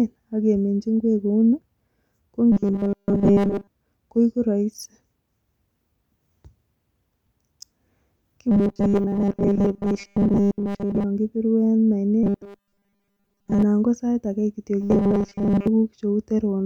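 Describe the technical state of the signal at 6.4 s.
At 6.4 s the speech signal is intact, with no audible fault at that moment.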